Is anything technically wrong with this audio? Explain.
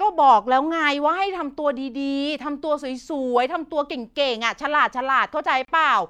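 Yes. At 5.65 to 5.68 s the speech drops into a gap of about 33 ms with smeared edges, then resumes exactly where it stopped. This is a gap at a join of encoded pieces: separately encoded segments were joined untrimmed, leaving encoder start delay and final-frame padding in place.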